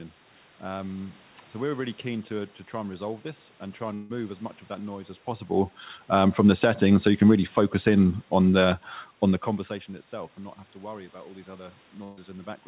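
Right after "resolve this and try", from 3.94 to 4.12 s, the sound smears into a fading buzz or hiss for about 0.16 s before "as much of that", likely a long network dropout. From 6.06 to 9.6 s, after "that noise as possible", automatic gain falling pulls the level, background included, down by about 5 dB until "itself and not have". Then at 12.04 to 12.19 s, just after "worry about all these", a burst of packet loss leaves roughly 140 ms missing, with the receiver continuing the last sound and fading it across the gap.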